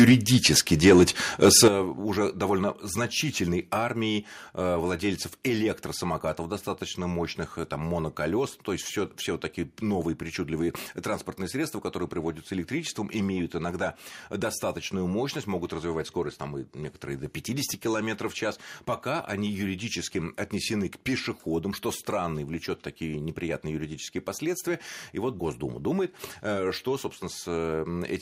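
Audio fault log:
0.00–1.04 s and 1.42–1.68 s, microphone overload. Peaks run about 2 to 3 dB past the converter's limit, and a few percent of samples are flattened. The loudest syllables get a harsh, crackly edge just before "уже довольно значительной". The input volume was likely set too high.
1.68 s and 3.87 s, microphone volume stepped down. Right after the second distorted peak, voice and background fall together by about 10 dB, just before "уже довольно значительной". After that phrase comes a slight further drop of about 1 dB. This is likely the call software lowering input volume.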